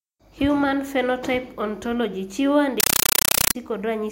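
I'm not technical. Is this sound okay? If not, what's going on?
No. From 2.80 to 3.55 s the speech is replaced by loud, chattering static: a compressed stream played as audio. Encoded Dolby Digital data was played directly as sound, not decoded. Unlike random hiss, this static pulses evenly, about 31 times a second.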